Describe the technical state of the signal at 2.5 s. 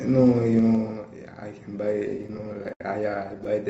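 At 2.5 s the audio is in repeated stalls (stutter), running 2.17 to 3.46 s: the jitter buffer kept emptying, so the receiver stretched the last sound across 20 short gaps, the longest 71 ms, making the speech drag and stutter.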